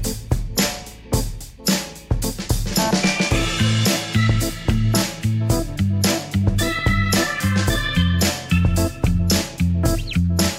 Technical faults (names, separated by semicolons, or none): train of clicks